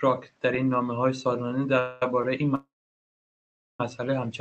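At 1.79 s the speech stops and the last sound is drawn out as a fading buzz until 2.03 s, about 0.22 s of filler with nothing lost afterwards. This is a call audio freeze, likely caused by packets held up in transit so the jitter buffer ran dry. When delivery resumed, playback picked up exactly where it had halted. The audio lost nothing but became about 0.22 s later.

Between 2.22 s and 2.24 s there is a short stall from a late packet. One packet missed its playout time, so the receiver held the preceding sound for about 17 ms, a brief smear with a faint buzzy dip, then continued from the same point with no content dropped.

At 2.55 s a second, much longer call audio freeze begins and lasts until 3.81 s. The last sound is stretched briefly and fades out, leaving roughly 1.1 s of silence before the speech returns mid-stream with nothing missing. In all, about 1.24 s is inserted. The likely cause is again a long hold-up in packet arrival that emptied the jitter buffer. 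The call codec's band limit near 8 kHz, consistent with Opus at around 32 kbps, can be heard throughout.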